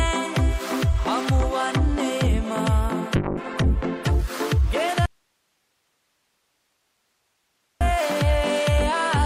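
A call bitrate drop hits at 3.17 s: the encoder falls from 128 kbps to 11 kbps, holds its lowest rate for about 1.1 s, and recovers by 4.37 s. The sound turns coarse and muffled as the high band is cut, which a spectrogram shows as a flat ceiling where the upper energy simply ends, with blockier, smeared detail below it until full bandwidth returns. From 5.06 s to 7.81 s there is an audio dropout to a faint residue lasting about 2.7 s. The signal vanishes abruptly and only hiss remains, roughly 50 dB below the normal level, before it snaps back. The waveform shows a hard-edged collapse to a thin noise floor rather than a taper, and the spectrogram shows an even grey band of broadband hiss across the gap. The likely cause is the wanted input being lost while the path after the break stayed open.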